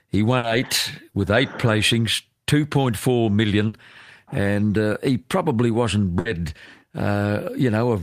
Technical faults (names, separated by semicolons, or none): burst of packet loss